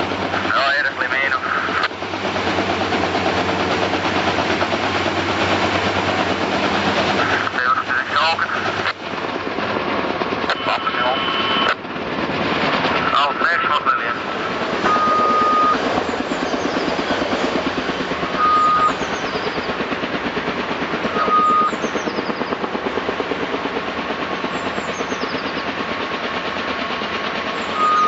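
Nothing stood out on listening; the audio shows the expected effects of a call's microphone processing and Opus codec path, with nothing above about 8 kHz.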